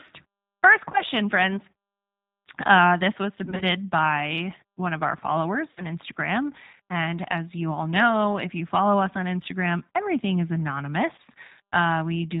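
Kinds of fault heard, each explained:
G.729 codec: throughout the clip, speech is rebuilt at 8 kbit/s from a vocal tract filter, pitch predictor and sparse pulses, so nothing above 4 kHz passes and the speech sounds plainly rough and synthetic.
VoIP packet loss concealed by the speech codec: at 0.92, 3.45–3.64 s (between "this was" and "by one of our"), 5.71–5.84 s after "one of our followers", and 11.16 s, the decoder extrapolates missing audio into fading buzz or coloured noise; gaps run 20–60 ms.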